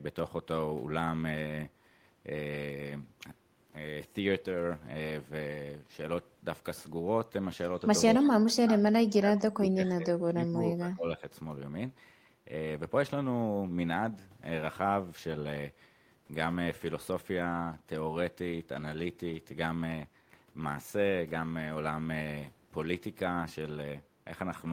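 A speech recording where, from 8.14 to 8.27 s, a faint copy of the talking trails the original by 200 ms, sitting roughly 25 dB below it. This echo leak likely comes from a loudspeaker on one end of the call feeding its microphone, with the echo canceller letting a short scrap through and sending it back. Overlapping that, the talker's level sags in pieces from 8.2 to 8.82 s and again, for about two seconds, from 9.04 to 11.23 s, dropping by as much as 25 dB or so before recovering. This looks like speech suppressed in double talk. While both ends were talking at once, the canceller probably could not tell the local talker from the returning echo, so it pulled the whole signal down.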